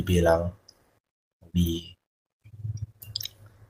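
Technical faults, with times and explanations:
No technical faults can be heard in the speech signal, whose level, continuity and frequency balance stay steady over the whole recording.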